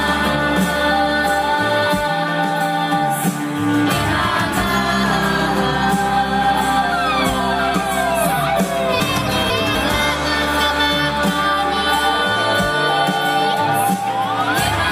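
Chunks out of order between 9.0 and 9.75 s: the audio here is cut into 250 ms pieces, and one piece arrives two chunks late, so it plays after the two that should follow it. Nothing is missing, but the three quarter-second segments are shuffled, leaving three abrupt joins where unrelated waveforms meet. The result is a brief jumbled stretch, heard as a garbled three-quarters of a second.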